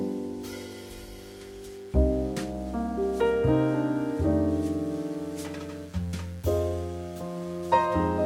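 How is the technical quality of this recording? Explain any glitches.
The recording is marred by a mains buzz. It starts at 1.21 s and runs to the end. The hum is built on a 60 Hz supply. A dimmer, rectifier or poor shielding lets sharp switching spikes into the signal path, twice per mains cycle. Those spikes carry a dense ladder of 60 Hz harmonics reaching into the kilohertz range. The result is a steady, raspy buzz rather than a smooth hum. It sits roughly 30 dB below the wanted sound.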